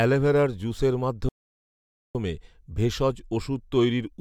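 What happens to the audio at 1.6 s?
At 1.6 s the speech has dropped into dead silence, part of a playback stall running from 1.29 to 2.15 s, roughly 0.86 s of nothing before the sound picks up again. The likely cause is the player starving for data or its thread being held up.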